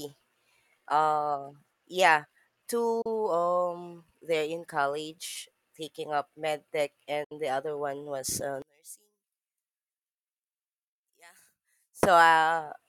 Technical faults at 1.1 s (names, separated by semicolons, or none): none